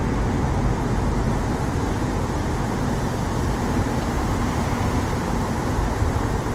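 Throughout the recording the sound is plainly rough and grainy, with tonal parts dissolving into noise while content still reaches 20.2 kHz. The likely cause is Opus compression in CELT mode refilling starved bands with folded or noise energy, which fits a 16 kbps rate.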